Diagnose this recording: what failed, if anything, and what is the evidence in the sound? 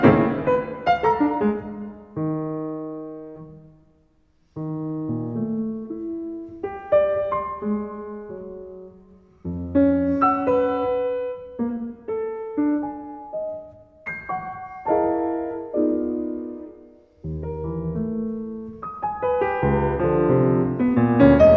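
Nothing in the signal chain audibly failed: the audio holds steady at every stage, with no breaks, level jumps, distortion or timing disturbances anywhere in the recording.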